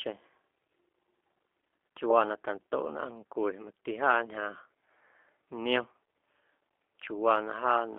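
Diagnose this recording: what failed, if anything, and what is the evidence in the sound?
The failure is at the codec stage: this speech has been through a G.729 codec for its whole length. The band sits between roughly 300 Hz and 3.5 kHz, so there's no air on top and no weight underneath. The rough, slightly synthetic buzz is plainly audible, which fits an 8 kbit/s stream. At that rate the voice is rebuilt from a vocal tract filter, a pitch predictor and a handful of pulses per frame rather than sent as a waveform.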